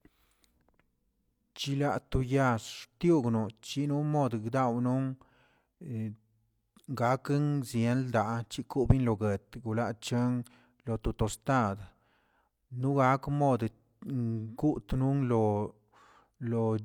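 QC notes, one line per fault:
No faults were found in this speech recording. Nothing calls for a note at any point.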